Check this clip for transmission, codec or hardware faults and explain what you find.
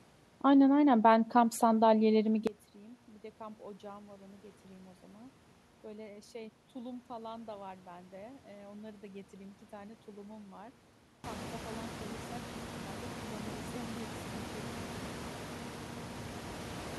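There's one real fault here. From 2.47 s to the end, the speech drops by about 22 dB. That's likely one channel inverted: the shared content cancels in the mono sum, leaving only the small mismatch between channels. The room noise climbing by about 21 dB around 11 s is just the room, not the system.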